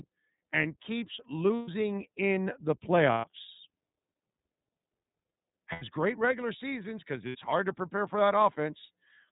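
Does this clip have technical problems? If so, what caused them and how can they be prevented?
Yes. The whole recording passes through the iLBC codec: nothing above 4 kHz survives, and the speech has a rough, slightly synthetic edge that fits a 13.33 kbps mode with 30 ms frames. A simple low-pass filter would dull the sound without adding that roughness. A wideband codec such as Opus would prevent it.

There are lost iLBC frames at 1.57 to 1.69 s, 3.12 to 3.25 s, 5.72 to 5.83 s and 7.29 to 7.36 s, lasting between 60 and 120 ms. Each gap sounds like a held, faintly buzzy vowel, as the decoder repeats the last pitch cycle mixed with noise. Unlike silent dropouts or a stuttering repeat, the speech snaps back almost immediately because each frame decodes independently. Forward error correction or packet redundancy on the network link would prevent it.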